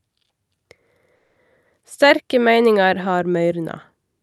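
At 1.15 s the speech stalls and, for about 0.23 s until 1.38 s, what you get is a stretched continuation of the last sound, a smeared buzzy tail that fades rather than dropping to silence. That's a call audio freeze, most likely packets held up in transit so the jitter buffer ran dry and the receiver papered over the gap. When the audio picks up again, nothing's been skipped; it's just running roughly 210 ms later than before, all through a call codec that tops out around 12 kHz.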